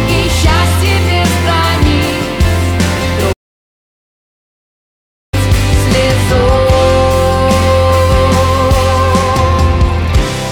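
At 3.32 s the sound cuts out mid-flow and stays silent until 5.34 s, a playback stall of about 2 s. The likely cause is the player running out of buffered data or its output thread being blocked; playback then resumes.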